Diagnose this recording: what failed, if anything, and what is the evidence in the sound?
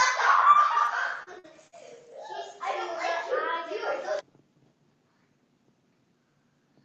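Network's the culprit here: repeated packet loss (robotic sound) from 0.85 to 1.74 s. Four quick holes, the longest 52 ms, each patched by stretching the last bit of sound. Roughly a sixth of that stretch comes out choppy, on top of the codec's 8 kHz ceiling.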